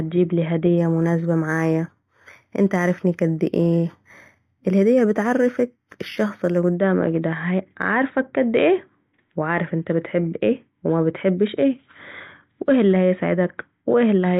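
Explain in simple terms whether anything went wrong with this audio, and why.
Something did go wrong, from 0.78 to 6.75 s, just before "ده هو عارفك كد". This is imaging from linear upsampling. The speech was converted to a higher sample rate, likely from 8 kHz to 48 kHz, by joining the original points with straight lines instead of proper filtering. That dulls the top of the sound and leaves faint mirrored copies between 4 and 8 kHz, which you hear as a thin metallic shimmer on hissy sounds like s.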